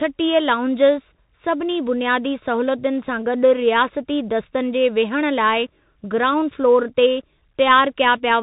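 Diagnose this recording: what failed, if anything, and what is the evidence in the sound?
The failure is at the codec stage: a Bluetooth CVSD headset codec, audible across the whole speech clip. Nothing passes above 3.8 kHz, so the speech sounds narrow and boxy. Damage is plainly audible. S sounds turn scratchy, loud bright sounds distort, and a granular hiss sits under the speech. CVSD codes one bit per sample, up or down, with an adapting step size. Fast high-frequency swings outrun that step. The sound fits CVSD's 64 kbps link.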